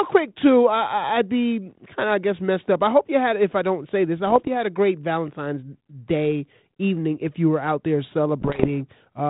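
Right after "don't say this I", from 4.24 to 4.49 s, there are bit errors on an ADPCM link: flipped bits knock the decoder's step size and predictor off, giving pops and rough, level-jumping bursts before "had a great." It happens again, harsher, from 8.40 to 8.71 s after "you were out there," at roughly three times the error rate. The band-limited sound around the bursts fits 32 kbit/s G.726.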